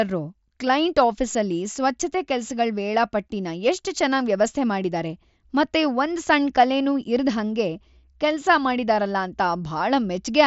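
Speech, with concealed Bluetooth headset packet loss at 1.33 s: roughly 15 ms of voice data between headset and phone went missing, and the receiver patched the gap by repeating a best-matching stretch of recent waveform. It leaves a brief buzzy smear just before "ಸ್ವಚ್ಛತೆ ಕೆಲ್ಸಗಳ್ ವೇಳಾಪಟ್ಟಿನ ಎಷ್ಟ್", heard through the mSBC headset codec's 8 kHz wideband limit.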